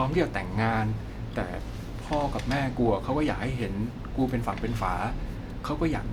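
No technical faults can be heard anywhere in the recording.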